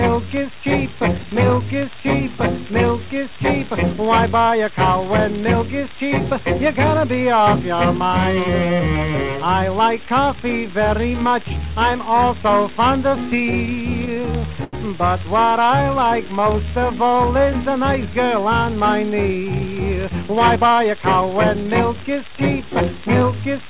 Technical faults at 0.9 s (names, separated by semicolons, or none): none